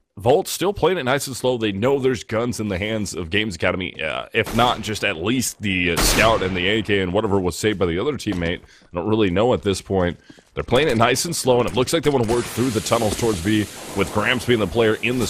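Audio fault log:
2.01 s, DAB burbling: a tiny blip where bit errors slipped past error correction at a very low error rate, so wrong samples put brief noise into single sub-bands.
4.50 to 4.58 s, DAB burbling: a short burst of burbling. Errors around 0.2 percent got past error correction, putting noise blips into single bands for a few frames.
13.33 to 13.70 s, DAB burbling: the longest stretch, a burbling run where corrupted sub-bands blip frame after frame.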